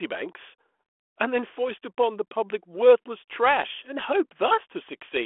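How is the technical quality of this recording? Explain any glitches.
No glitches or faults can be heard in the recording. The speech comes through a G.726 ADPCM telephone path at 32 kbit/s, limited to the 300 Hz to 3.4 kHz line band, with only the light coding texture that rate leaves behind.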